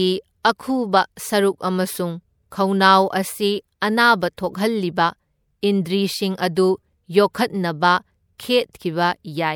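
Pre-echo appears five times in this speech, at 0.43, 2.50, 4.37, 7.34 and 8.38 s. Each time a short hiss arrives just ahead of a sharp onset, spreading about 19, 18, 11, 12 and 15 ms before it. The codec's noise, sized for the loud attack, leaks across its whole block into the silence before it, dulling the attack. Unlike a true echo or reverb tail, the smear comes before the sound, not after it.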